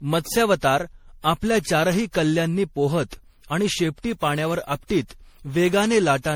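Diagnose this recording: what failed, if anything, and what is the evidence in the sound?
Codec stage: the speech sounds swirly, smeared and hollow throughout, with blurred attacks. This is likely generation loss from roughly seven MP3 passes at 64 kbit/s.

Converter stage: sample clock jitter from 4.05 to 5.91 s, after "चारही कल्ल्यांनी पोहत आणि", adds slope-dependent hiss around 30 dB below the signal.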